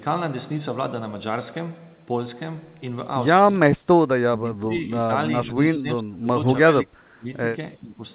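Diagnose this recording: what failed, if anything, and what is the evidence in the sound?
The speech sinks abruptly at 4.28–4.9 s, 5.07–5.12 s, 5.44–6.29 s, 6.72–7.28 s and 7.76–8.01 s, by up to about 30 dB. This is likely speech suppressed in double talk: the echo canceller, hearing both sides at once, treated the talker as echo and attenuated it.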